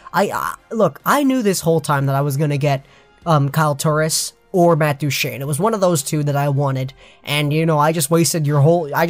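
No technical faults can be heard anywhere in the recording. Nothing in the audio needs a timestamp or points to a problem in the chain that produced it.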